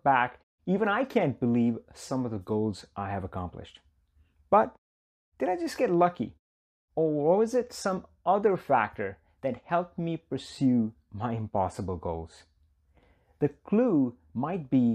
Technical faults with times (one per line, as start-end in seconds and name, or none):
none